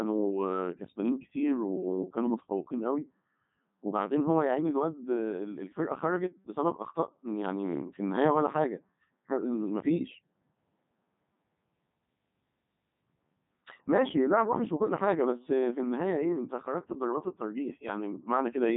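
From start to finish this speech has run through a Codec 2 vocoder, and it shows. The decoder rebuilds each voice from sine waves driven by pitch and envelope, so it sounds robotic and buzzy, heavily mangled, with nothing above 3.8 kHz. That fits the top 3.2 kbit/s mode.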